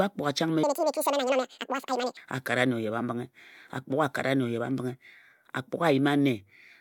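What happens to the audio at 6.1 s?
Nothing goes wrong at 6.1 s; the speech carries on intact through that moment with no fault to be heard.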